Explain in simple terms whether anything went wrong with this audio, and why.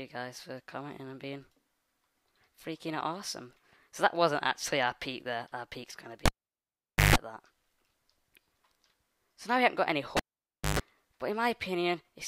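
A cable was pulled and plugged in twice, at 6.26 to 7.16 s and 10.17 to 10.79 s. Each time a pop cuts the sound to near silence, then a brief 50 Hz buzz and a second pop bring it back. The buzz and pops set it apart from a plain dropout.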